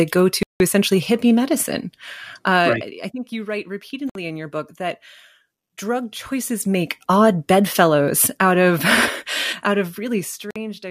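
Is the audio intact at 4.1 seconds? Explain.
No. A Bluetooth stall breaks the speech from 4.10 to 4.16 s, right after "I think you write" and before "in your book that". The sound drops to silence for about 57 ms and then resumes. The likely cause is radio interference delaying packets on the wireless link, so the headphones' small playback buffer emptied and had nothing to play until the retransmitted packets arrived, at which point speech carried on.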